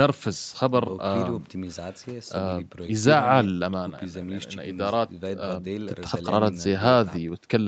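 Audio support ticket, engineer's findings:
Speech signal carried through call microphone processing and WebRTC call path, content limited to roughly 8 kHz bandwidth, with nothing heard beyond the normal behaviour of that chain.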